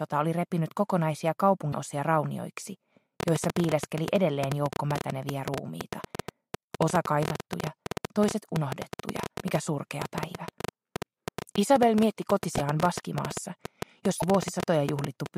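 A broken MP3 bit reservoir first shows at 1.72 to 1.75 s. The sound skips ahead and a brief chirp or burst of noise fills the gap. The same fault returns at 9.40 s, 12.57 to 12.59 s and 14.20 to 14.22 s. Each event lasts about one 24 ms frame. The likely cause is a stream with frames cut out, so the next frame reaches back for borrowed reservoir data and decodes bytes from a different frame instead.

A train of clicks begins at 3.20 s and continues to 15.27 s, with around 150 similar pops arriving unevenly at roughly 9.7 per second. They peak at about 15 dB above the surrounding sound and tick through pauses as well as louder passages. Interference from nearby equipment or a faulty connection or power supply is the likely source, injecting a repeated pulse into the signal over that whole stretch.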